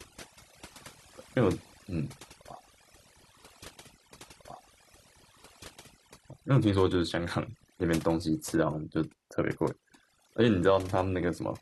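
A speech recording with overdone noise removal throughout. The reduction was set so aggressively that frequency bands near the estimated noise floor are pulled down or gated off, taking low-level voice detail with them. The background drops and breaks up into twinkling specks.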